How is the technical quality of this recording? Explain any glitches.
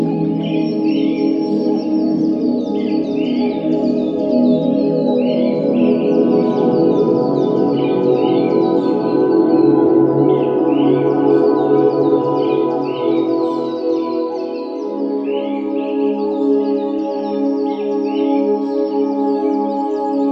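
No glitches or technical faults can be heard anywhere.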